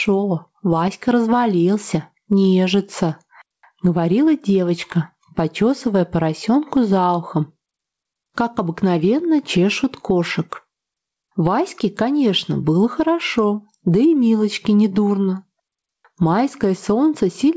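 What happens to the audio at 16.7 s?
At 16.7 s the audio is still affected by the gain pumping that runs through the whole clip. Loud and soft parts end up closer in level and the sound is squashed, with a gain swing of around 15 dB. The likely cause is input gain set far too high, so a fast limiter clamps down on each peak. On a waveform the envelope looks flattened, with quiet stretches lifted and the noise floor rising and falling. On a spectrogram the wideband background brightens and darkens in step with the loud sounds, below the 8 kHz ceiling of the call path.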